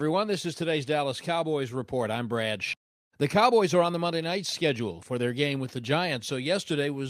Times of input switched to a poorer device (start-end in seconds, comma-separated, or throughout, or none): none